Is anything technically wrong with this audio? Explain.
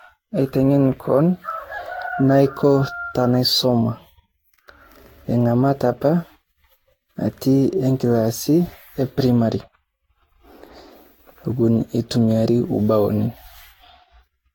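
Yes. Generation loss runs throughout this speech. The speech was likely re-encoded around seven times with a lossy codec, which fits Vorbis near 66 to 69 kbit/s, each pass quantising afresh, so the speech sounds swirly, hollow and smeared, with blurred attacks and nothing above 19.2 kHz.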